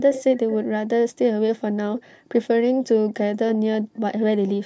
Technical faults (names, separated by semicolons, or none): echo leak